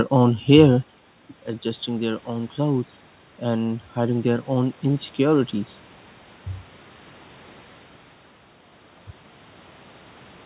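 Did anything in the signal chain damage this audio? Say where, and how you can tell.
Yes. Automatic gain rising, from 1.62 s to 5.59 s, in the call processing stage. After the talker moves away at roughly 1 s, the level at the microphone falls by about 12 dB. The gain control then lifts its gain by about 6 dB over roughly four seconds. You can hear the speech and the room noise swell together during that stretch. That shared rise marks a gain change rather than the talker returning. The band stops at 4 kHz, which fits a G.711 mu-law call path.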